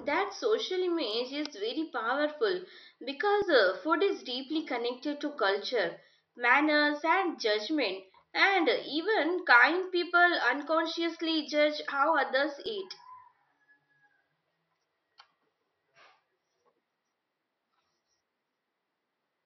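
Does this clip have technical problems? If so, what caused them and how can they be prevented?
Yes, there are two skips in the speech, at 3.42 s and at 12.66 s, the second right after "unconsciously judge how others". The likely cause is a dropped buffer (overrun): the recording software fell behind and the hardware overwrote samples before they were collected, so roughly 30 ms and then about 10 ms went missing and the audio on either side got spliced together. The room noise sits about 55 dB below the speech. To prevent it, use a larger buffer and keep the recording machine lightly loaded.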